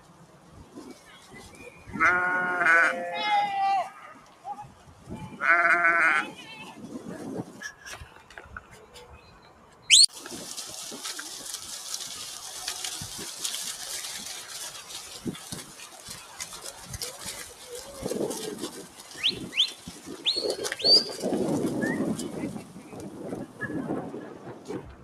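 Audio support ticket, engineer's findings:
Noise suppressor applied to music or sounds, whole clip. Level swings of around 15 dB as a speech-tuned suppressor reads steady tones, ambience and reverb as noise. Attacks pass, sustained parts and tails drop, giving pumping and a thinned sound.

Sound cut by the noise suppressor at 0.0–1.88 s, 4.14–5.09 s, 7.44–9.89 s, 14.82–20.08 s and 22.6 s to end. Drops of about 8 to 10 dB, deepest near the end. Sustained and decaying material attenuated or truncated, onsets largely intact.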